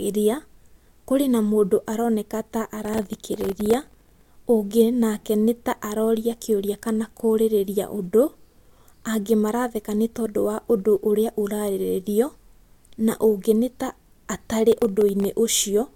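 From 2.85 to 4.26 s, and again from 14.72 to 15.25 s, the speech carries processor overload crackle. The processing could not finish its very short buffers on time, each about 1.5 ms, and missed dozens of deadlines in the first stretch and a dozen or so in the second. Every miss drops a sliver of silence with hard edges into the signal, and the rapid run of them sounds like gritty, tearing crackle that stops once the load eases.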